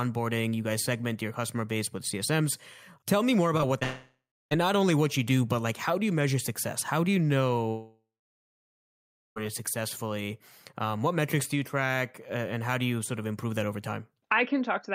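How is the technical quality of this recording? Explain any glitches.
The recording has clear transmission problems: two brief glitches and two longer gaps where the sound stops and later resumes.

Short concealed packet loss at 3.57–3.61 s and 3.79–3.83 s: about 20 ms of audio failed to arrive, and the receiver filled it by extending the preceding sound before blending back. Each is heard as a quick smear or wobble.

From 3.83 to 4.53 s, and again from 7.69 to 9.38 s, the sound carries on as a fading buzz or hiss, then falls silent for about 0.3 s and 1.3 s respectively before returning further along. The likely cause is a long network dropout. Unlike the brief losses, a real stretch of audio is skipped.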